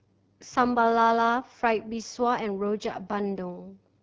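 AMR wideband (HD Voice) codec damage runs throughout the speech. The codec models only the band up to 6.4 kHz with a pulse-excited vocal tract and fills 6.4 to 7 kHz with shaped noise. The plainly rough, raspy texture fits its low 8.85 kbit/s mode.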